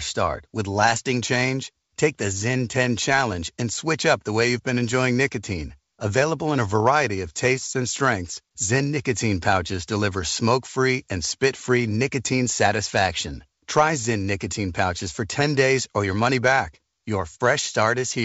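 Speech carried over a G.722 wideband link, clear up to about 7 kHz. From 3.32 to 3.37 s, just before "and switch up the", bit errors on an ADPCM link cause a short pop and rough burst. Flipped bits upset the decoder's step size and predictor, so the damage rings on briefly. It suggests an error rate around a third of a percent, hitting a few frames.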